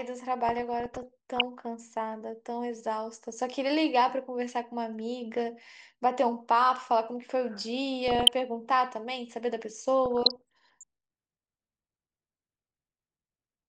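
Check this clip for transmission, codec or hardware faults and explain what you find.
DAB burbling affects the speech at 0.49–1.42 s, 8.08–8.33 s and 10.06–10.83 s. Bit errors of a fraction of a percent slip past error correction and corrupt MP2 sub-band levels frame by frame. The result is burbling, short blips of noise over the speech rather than the silent gaps of lost packets.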